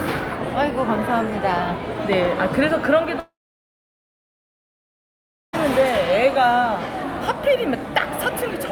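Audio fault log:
3.19–5.55 s, long network dropout: a short fading buzz, then silence for about 2.2 s, likely from lost packets. Audio resumes without the missing part.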